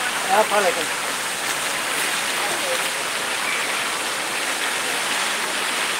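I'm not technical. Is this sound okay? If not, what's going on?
Yes, no faults are audible.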